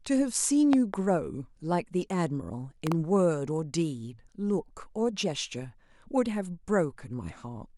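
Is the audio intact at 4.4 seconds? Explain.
Yes, at 4.4 seconds the speech runs intact, with no dropout, click, distortion or other fault at that moment.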